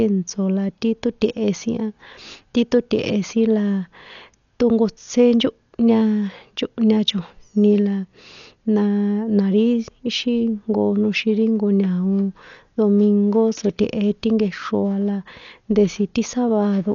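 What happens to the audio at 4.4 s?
At 4.4 s you're hearing the same damage that runs through the whole clip, and it's most likely Dolby Digital compression at a very low bitrate, something like 48 kbps. The encoder has narrowed the band, so there's nothing above about 6.9 kHz, and it's starved many frequency lines of bits, leaving the decoder to fill them with noise. The speech comes out dull, with a rough, fluttery haze around its tonal parts.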